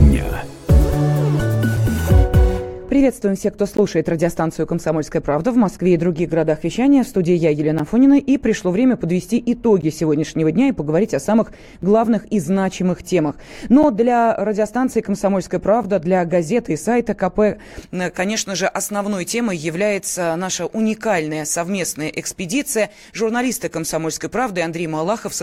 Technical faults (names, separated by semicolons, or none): de-emphasis applied wrongly; gap between stream segments